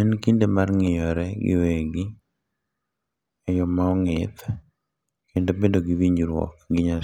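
Nothing stood out on listening to this speech recording.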